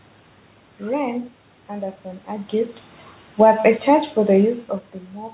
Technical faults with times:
3.26-4.59 automatic gain falling

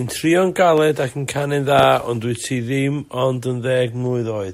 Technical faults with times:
0.78-0.80 loud pop
1.79-1.85 loud pop

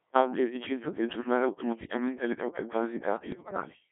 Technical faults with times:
0.00-3.92 Codec 2 vocoder
1.73-1.97 bit errors on digital voice radio
3.32-3.65 bit errors on digital voice radio

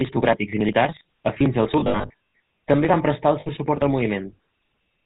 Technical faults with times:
0.00-5.05 GSM full-rate codec
1.80-2.40 lost GSM frames
3.40-3.47 lost GSM frames

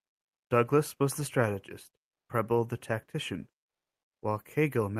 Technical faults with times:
none

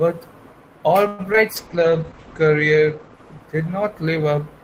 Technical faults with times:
1.07-1.21 call audio freeze
1.33-1.38 short concealed packet loss
1.57-4.48 call bitrate drop
1.71-2.10 jitter buffer slow-down

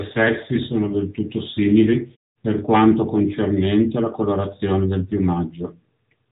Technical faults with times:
0.00-6.31 AMR narrowband mobile codec

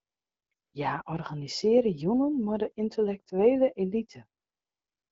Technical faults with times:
0.00-0.73 AMR comfort noise
4.41-5.12 AMR comfort noise

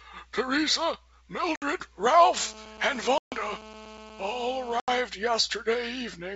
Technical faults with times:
1.56-1.63 packet loss on an ADPCM call
2.36-5.01 GSM phone buzz
3.18-3.34 packet loss on an ADPCM call
4.80-4.89 packet loss on an ADPCM call

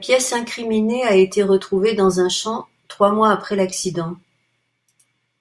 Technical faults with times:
none

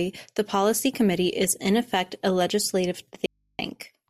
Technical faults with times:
3.26-3.59 audio dropout to a faint residue

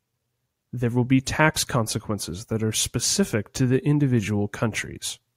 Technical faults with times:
none

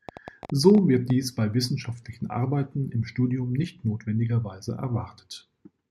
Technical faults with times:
0.09-1.11 train of clicks

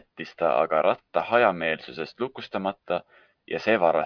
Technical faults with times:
none

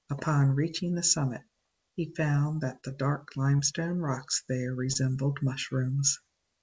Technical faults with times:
2.81-2.85 short concealed packet loss
3.57-3.61 short concealed packet loss
4.93-4.97 short concealed packet loss

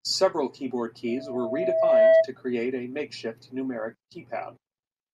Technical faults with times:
1.08-2.28 loudspeaker feedback squeal

